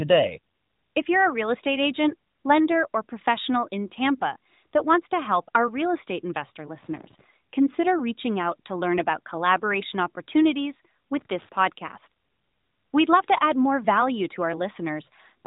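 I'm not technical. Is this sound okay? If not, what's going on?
No. There are two short bursts of crackling, scratchy noise in this speech. The first runs from about 6.79 to 7.24 s, right after "our real estate investor" and before "consider reaching out to". The second runs from about 11.19 to 11.49 s, just after "learn about collaboration opportunities". This is loose connector crackle: a worn or dirty plug or socket briefly loses and regains contact as it moves, chopping the sound into rapid pops.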